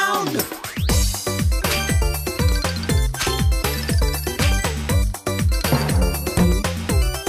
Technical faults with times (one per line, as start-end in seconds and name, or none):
none